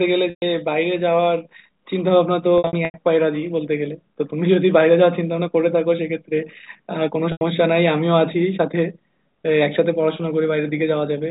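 At 0.30–0.42 s, 2.58–2.94 s and 7.32–7.41 s the speech briefly turns into a held, buzzy tone. This is packet loss with pitch repetition: the missing audio is bridged by looping the last pitch period. The middle gap scatters 210 ms of loss over 360 ms.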